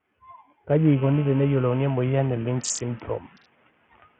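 From the start, heavy coding damage runs through the speech: the treble flickers in and out over gritty grain, most likely Bluetooth SBC compression at a starved bit pool, one that points to roughly 48 kbps. On a spectrogram the upper sub-bands appear as patchy, blinking blocks below the 8 kHz ceiling of the call microphone processing.

Between 3.02 and 3.36 s, speech cut by the noise suppressor pulls part of the speech down by up to about 15 dB, for a little over a tenth of a second in total, so those sounds come out swallowed. The suppressor misread them as noise; earlier, the room noise had risen by about 14 dB around 1.5 s. The waveform shows a sudden dip in the envelope, and the spectrogram shows speech energy thinning out.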